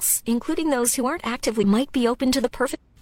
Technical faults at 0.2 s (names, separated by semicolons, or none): none